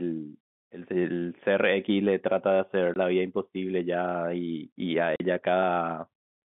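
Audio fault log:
2.94–2.96 s and 5.16–5.20 s, packet loss filled with silence: 20 ms and 40 ms gaps, which fits one and two lost 20 ms packets, appear as sharp-edged flat-line holes in the waveform and blank vertical strips with sharp edges on the spectrogram.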